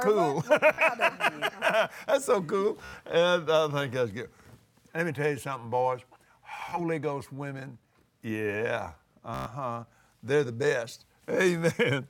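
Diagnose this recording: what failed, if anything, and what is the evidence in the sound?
Bluetooth stutter: the wireless link lost packets, so the receiver replayed its last buffer, producing brief buzzing repeats at 0.73, 2.85, 6.6 and 9.34 s.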